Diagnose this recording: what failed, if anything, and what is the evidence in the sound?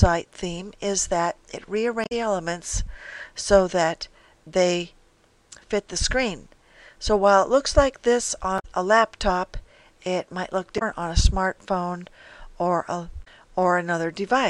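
Short glitches break through the sound at 2.03–2.12 s, 8.56–8.65 s, 10.75–10.82 s and 13.21–13.28 s. This is damaged data in a compressed stream, a codec-stage failure: corrupted bytes garble those frames, and the decoder loses sync until it finds a valid frame header.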